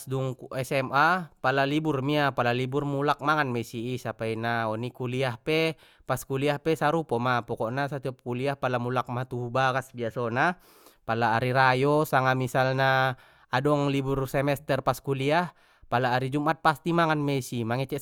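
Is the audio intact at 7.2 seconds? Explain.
Yes, at 7.2 seconds the speech plays through cleanly, with no dropout, click, distortion or other fault at that point.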